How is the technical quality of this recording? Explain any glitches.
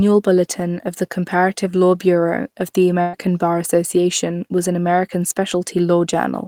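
The recording has one audible glitch. From 3.01 to 3.16 s, just after "of the", a burst of packet loss occurs. The receiver stretches the last received sound for about 115 ms while fading it, giving a held, decaying buzz. About 120 ms of speech is skipped. Unlike a plain dropout, the gap is never silent; the concealed tail bridges it.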